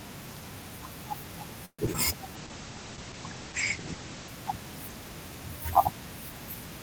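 A speech recording with three kinds of call fault, all in the first two-thirds. At 1.65 s the sound stalls for about 0.15 s. The last sound carries on as a fading buzz and then about 60 ms of silence before the speech resumes where it left off. Nothing seems lost. The speech just arrives late. This is a call audio freeze, likely caused by delayed packets draining the jitter buffer while the receiver stretched what it last had. Right after, two short concealed packet losses follow, at 1.87 to 1.89 s and 1.93 to 1.96 s. Each drops about 20 ms of real audio. The gap is bridged by a brief continuation of the preceding sound that blends back in. It is heard as a quick smear or wobble rather than a hole. Around the first one the timing also catches up slightly, by roughly 15 ms. From 2.38 s to 4.36 s there is a call bitrate drop. The encoder falls from 32 kbps to 11 kbps and stays at the low rate for about 1.9 s. 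The audio bandwidth shrinks from 20 kHz to 8 kHz. The speech turns muffled, with coarse, watery detail. The top end returns when the rate recovers.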